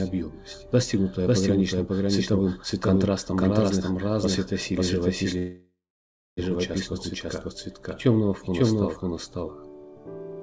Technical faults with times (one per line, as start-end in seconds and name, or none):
0.00-10.43 doubled audio track
5.38-6.39 call audio freeze